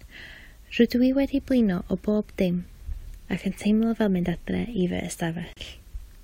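At 5.53 to 5.57 s, the speech drops out for about 35 ms. This is a gap at a join of encoded pieces. Two separately encoded segments were joined untrimmed, leaving encoder delay and end padding in place. The silence has smeared edges, then speech resumes.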